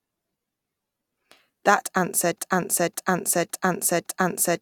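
At 2.38 s the speech locks into a broken-record loop. A 0.56 s fragment repeats exactly four times, back to back, until the end at 4.62 s. A stalled player or stream likely kept resending its last buffer. On a spectrogram, identical blocks tile at 0.56 s intervals.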